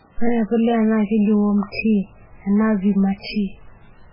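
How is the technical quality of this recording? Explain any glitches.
Poor: heavy coding damage runs through the whole recording.

MP3 compression, throughout: nothing survives above 5.2 kHz, and the damage is heavy, which fits a very low bitrate of around 8 kbps. This is likely MP3 coding. Starved of bits, the encoder cuts the treble at a fixed point and discards weaker frequency lines, which appear and vanish from frame to frame. The speech therefore sounds dull, watery and swirly, with smeared consonant onsets and a metallic edge on sibilants.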